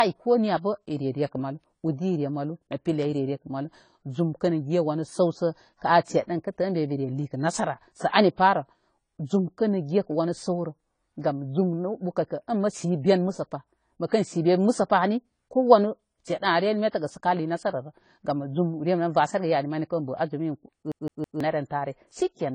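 Lossy coding is likely the cause of the damage that runs through the whole speech clip. The encoder appears to be AAC compression at a low bitrate, which fits AAC-LC at around 24 kbps. To save data it cuts off the top of the spectrum, so nothing is heard above 10 kHz, and it quantises the remaining bands coarsely. The result is plainly audible: the speech sounds dull and smeared, with a warbly, fizzy edge on sibilants and held sounds.

At 14.08 s there is pre-echo. A sharp onset falls late in a transform block, and the codec's quantisation noise, sized for that loud attack, is spread across the whole block, including the quiet stretch just before it. About 39 ms of short hiss runs ahead of the attack from 14.08 to 14.12 s, and the onset itself lands softer and less crisp than it should.

From 20.92 to 21.40 s the playback behaves like a CD stuck on one turn. The read position keeps jumping back to the same spot, so a 162 ms slice of audio is played three times in a row, with a brief drop at each jump. 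The result is the fast, regular stutter of a skipping disc. The same fragment repeats mechanically for about half a second before normal playback resumes.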